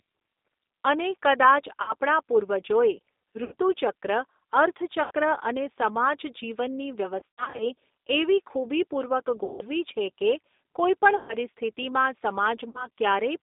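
A G.729 codec, most likely the G.729A variant at 8 kbit/s, carries this speech throughout. It rebuilds each 10 ms frame from a vocal-tract filter, a pitch predictor and a few pulses, and the line passes only about 250 Hz to 3.7 kHz. The result is plainly audible damage: a thin, band-limited voice with a rough, synthetic edge. VoIP packet loss concealed by the speech codec hits at 1.82, 3.44, 5.03, 7.20, 9.44, 11.17 and 12.69 s. Each time, missing packets force the decoder to extend its last pitch and filter state at falling gain, so the voice smears into a buzzy tone or coloured noise that fades. The gaps run from about 60 ms to 160 ms, with sizes that fit lost 20 ms packets. At 7.20 to 7.66 s, 240 ms of loss is scattered over 400 ms in runs up to 60 ms. Because each frame builds on the last, the voice stays weak or distorted for tens of milliseconds or more after each gap.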